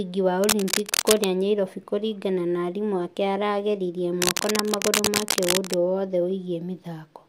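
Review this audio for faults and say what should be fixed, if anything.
Cable scratch noise occurs from 0.44 to 1.25 s, just before "nyairobi kũringana na arimũ", and from 4.18 to 5.74 s, after "na arimũ ake aragĩririe". Dense, irregular rustling sits about as loud as the speech, likely from a worn cable or connector whose contact resistance fluctuated as it moved. Replace the worn cable or connector and secure the cable run so it cannot shift during recording.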